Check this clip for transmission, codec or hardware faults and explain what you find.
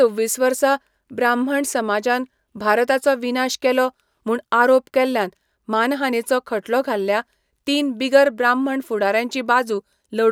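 No faults turned up when I checked the clip, so there is nothing to explain.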